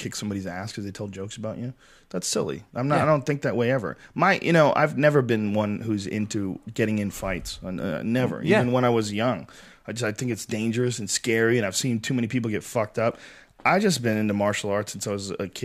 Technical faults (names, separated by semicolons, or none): none